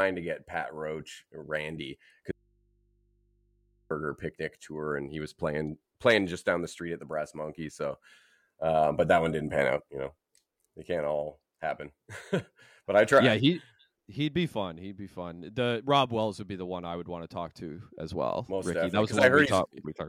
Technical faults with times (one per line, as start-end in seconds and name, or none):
2.31-3.91 audio dropout to a faint residue